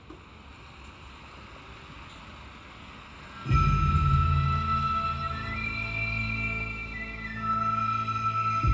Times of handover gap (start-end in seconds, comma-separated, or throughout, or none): none